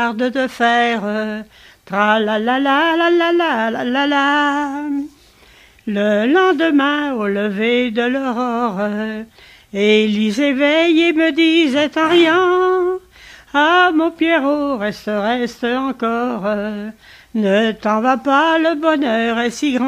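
No technical faults can be heard anywhere in the recording, and the signal holds steady throughout.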